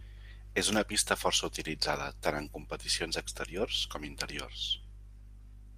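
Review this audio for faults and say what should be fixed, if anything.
Nothing needs fixing, as no faults can be heard anywhere in the speech. There is no glitch, dropout or distortion to correct.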